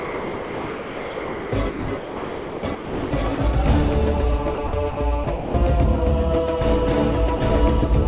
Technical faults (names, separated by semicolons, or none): sound chopped by the voice detector; sound dropped by the voice detector